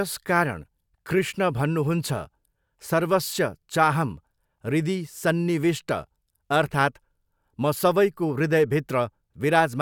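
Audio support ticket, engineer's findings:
No faults found on listening to the speech recording. No component flagged; nothing to escalate.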